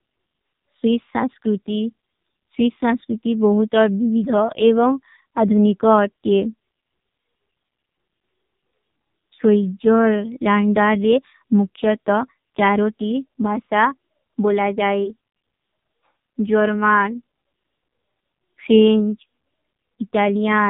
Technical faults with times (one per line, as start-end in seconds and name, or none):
0.00-20.69 AMR narrowband mobile codec